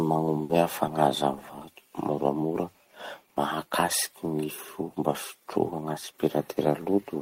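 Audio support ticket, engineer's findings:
Burst of packet loss, 0.43 to 0.52 s. Receiver holds and fades the last sound for 60 ms. Speech resumes with 40 ms missing. Network path.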